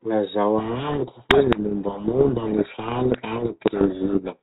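From 0.58 s to 4.38 s the speech is buried in harsh, grinding distortion, a codec payload misread in which the G.726 code words arrive with their bit order swapped. Unlike low-bitrate G.726 hiss, this buries the speech rather than riding under it.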